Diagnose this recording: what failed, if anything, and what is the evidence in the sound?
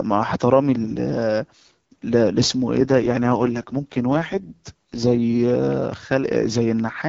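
An AMR rate drop at the codec, ordered by the network, runs from 2.76 to 5.20 s. The speech turns rough and synthetic, consistent with AMR-WB falling from 12.65 to 6.6 kbit/s. A spectrogram keeps its 7 kHz edge but shows smeared harmonics. The waveform has no gap.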